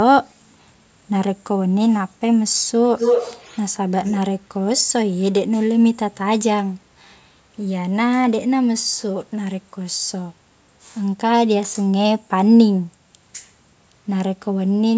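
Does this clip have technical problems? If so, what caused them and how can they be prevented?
Yes. From 2.96 to 3.66 s, and again from 4.04 to 4.25 s, there's an echo leak: a copy of the speech trailing about 205 ms behind, first nearly as loud as the original, then much fainter. It's likely a far-end speakerphone whose echo canceller let its own playback slip back down the line. Using a headset or better echo cancellation at that end would prevent it.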